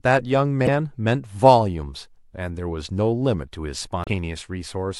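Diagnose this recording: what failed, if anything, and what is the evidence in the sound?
The codec stage failed: damaged data in the compressed stream. Brief glitches cut into the speech at 0.64 to 0.69 s and 4.04 to 4.08 s, each about 45 ms. Corrupted frames there were misdecoded until the decoder found the next valid frame header and resynchronised.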